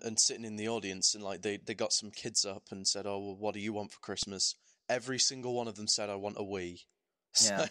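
At 4.23 s the speech hits an underrun with held sample: the buffer ran dry for about 2 ms, and the converter froze at its last value rather than dropping to silence, so the pause barely clicks and playback resumes where it left off.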